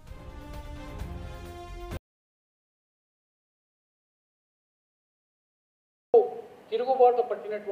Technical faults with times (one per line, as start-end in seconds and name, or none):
1.97-6.14 audio dropout to silence